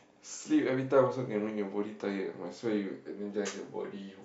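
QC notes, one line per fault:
No faults found in this speech clip.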